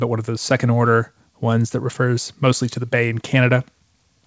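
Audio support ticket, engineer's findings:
Nothing stood out on listening to the speech, which came through a G.722 call path with nothing above 8 kHz, as expected for that codec.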